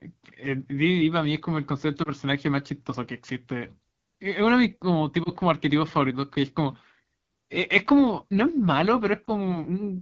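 Speech coded with the AMR wideband (HD Voice) codec, with plainly audible codec damage throughout. The sound is rough and raspy, which fits the 8.85 kbit/s mode, one of the lowest rates. At that rate the pulse-driven vocal tract model has too few bits to reproduce the excitation cleanly, and the 6.4 to 7 kHz band is filled with shaped noise rather than real signal.

Lost AMR speech frames cause three disturbances, at 2.03 to 2.10 s, 5.23 to 5.31 s and 9.26 to 9.57 s. Each fits a single lost 20 ms frame. The decoder conceals the gap by reusing the last good pitch and vocal tract parameters at falling gain, which gives a brief dip or warble. It then takes a moment to recover, so the effect runs longer than the missing 20 ms. It lasts longest at 9.26 s.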